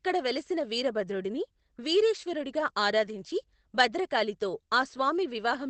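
A lost packet rebuilt from error correction occurs at 2.47 to 2.49 s in this speech clip. A 20 ms stretch, which fits a single missing Opus packet, was replaced by the low-bitrate copy carried in the next packet, so there is no gap, only a brief rougher, noisier patch. The call path limits the audio to about 8 kHz.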